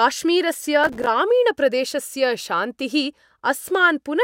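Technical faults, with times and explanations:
0.84–1.07 s, processor overload crackle: about twenty late buffers of a few milliseconds each drop to silence, giving hard-edged waveform gaps and vertical broadband spectrogram streaks.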